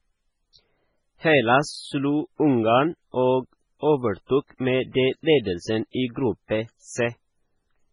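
MP3 compression runs throughout the speech, likely the cause of its watery, swirling texture. Nothing reaches above 10.5 kHz, and heavy damage points to a very low bitrate of around 16 kbps, where weak frequency lines flicker between frames and consonants turn metallic and smeared.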